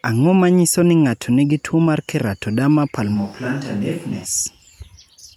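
A switch to a distant microphone runs from 3.17 s to 4.24 s. The speech abruptly turns roomy and hollow, loses its low end, and drops by roughly 5 dB, while the background noise comes up to around 25 dB below the speech. The likely cause is that the close microphone's feed dropped out, leaving a mic further away to carry the signal. At 4.24 s the close, fuller sound returns just as suddenly.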